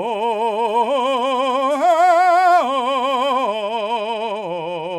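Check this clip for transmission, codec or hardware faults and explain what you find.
Listening through the music, nothing stood out that would point to a transmission, codec or hardware problem.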